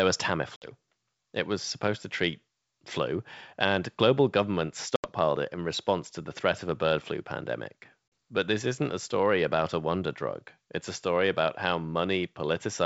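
Speech carried over a G.722 wideband call suffers packet loss on an ADPCM call: a few packets drop at 0.56–0.71, 4.96–5.09 and 8.08–8.12 s, leaving silent holes of 60, 80 and 40 ms, after which the mismatched decoder predictor brings the speech back slightly distorted until it resettles.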